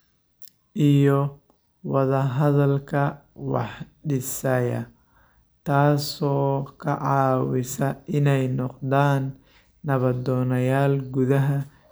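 No technical faults can be heard anywhere in this speech recording. Nothing at any point in the audio marks a moment that calls for a timestamp or a closer listen.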